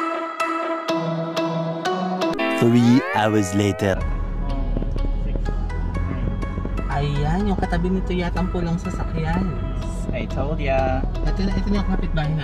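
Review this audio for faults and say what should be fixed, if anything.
A train of clicks runs from 4.77 to 12.0 s: about forty near-identical pulses at roughly 4.7 per second, irregularly spaced, peaking about 10 dB above the sound. The likely cause is nearby interference or a faulty connection or power supply. Unlike buffer-underrun dropouts, the pulses land on the audio rather than gapping it. Shielding cables and keeping interference sources away from the interface would prevent it.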